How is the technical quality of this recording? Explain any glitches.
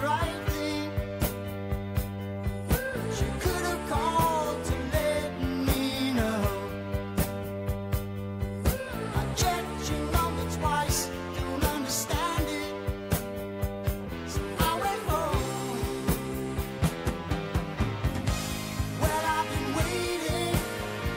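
The recording has one continuous fault. From 0.11 to 21.13 s, clock slip clicks: likely two unsynchronised clocks about 400 ppm apart, dropping or repeating single samples roughly every 50 ms, producing a faint steady ticking rattle.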